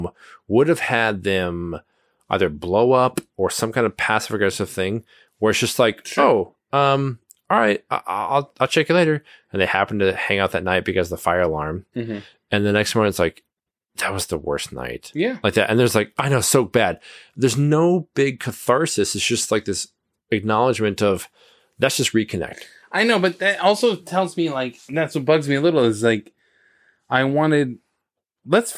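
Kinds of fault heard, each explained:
No technical faults can be heard anywhere in it.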